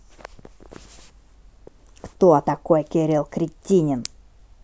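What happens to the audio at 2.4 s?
Nothing goes wrong at 2.4 s; the speech carries on intact through that moment.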